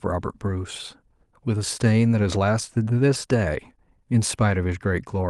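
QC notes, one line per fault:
No faults turned up on this one, nothing here that needs flagging.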